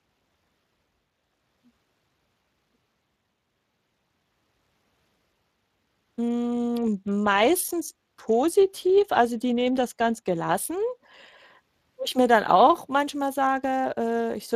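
Speech coded with the Speex codec throughout, with plainly audible damage: a hoarse, noisy texture that fits a bitrate around 22 kbps. Unlike the swirly, watery smearing of transform codecs such as MP3, this is CELP roughness, and nothing remains above about 15.3 kHz.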